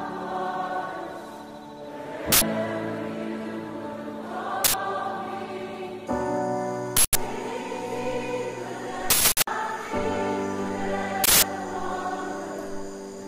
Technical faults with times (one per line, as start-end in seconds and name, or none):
2.32-2.41 uninitialised buffer
4.64-4.74 uninitialised buffer
6.97-7.15 uninitialised buffer
9.10-9.47 uninitialised buffer
11.24-11.42 uninitialised buffer